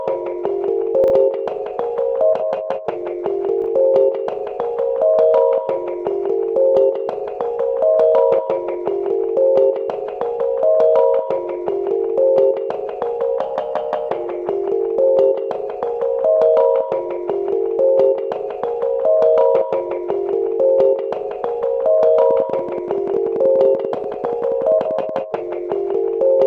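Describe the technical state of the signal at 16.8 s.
At 16.8 s the signal is intact, with no dropout, clipping, distortion or other fault audible at that moment.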